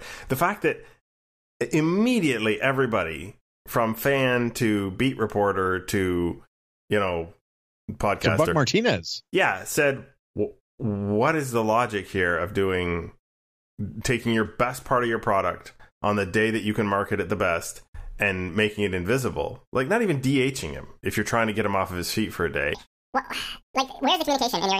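A speech recording whose final stretch, from 22.75 s to the end, just after "his feet for a", suddenly turns high and hurried, pitched up around ten semitones. This section at the wrong speed runs 1.95 times too fast, likely from playback or editing against a mismatched clock.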